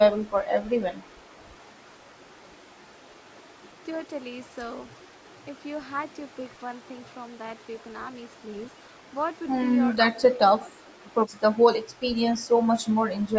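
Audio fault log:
10.31–10.42 s and 10.58–11.08 s, speech suppressed in double talk: both ends were likely talking at once, and the echo canceller, unable to tell this talker from the returning loudspeaker echo, pulled the level down on both. The speech ducks by as much as about 20 dB, first in a brief dip of roughly a tenth of a second, then, after a short recovery, in a longer half-second hollow where the speech sinks before returning.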